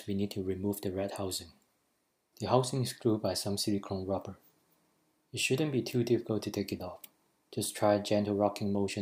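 No technical fault can be heard anywhere in the audio. Nothing in it calls for a time or a cause to be given.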